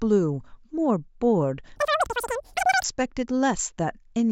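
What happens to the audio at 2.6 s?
At 2.6 s the audio is inside a wrong sample rate fault running from about 1.76 to 2.84 s. The samples are clocked out three times faster than they were captured, with no resampling, which fits 16 kHz material played at 48 kHz. Speed and pitch rise together by that factor of 3, about 19 semitones, so the speech sounds squeaky and rushed through the span.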